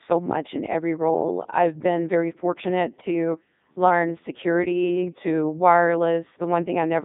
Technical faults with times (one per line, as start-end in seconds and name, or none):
0.00-7.04 Codec 2 vocoder